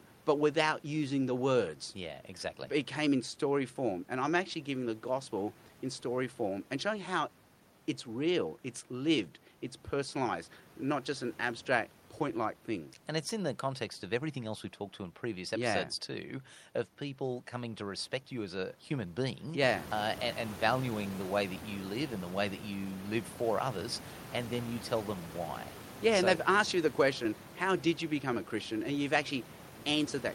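Clock drift between sender and receiver runs through the whole clip: the sender's clock is roughly five percent fast, so the jitter buffer keeps overfilling rather than draining, unlike random network jitter. From 0.15 s to 30.35 s, repeated timing corrections discard small pieces to catch up. The result is speech running at about 104% pace with faint, unevenly spaced hiccups, all trimming in the same direction rather than repeating. The room noise, which rises by about 16 dB near 19.5 s to sit about 16 dB below the speech, is part of the recording.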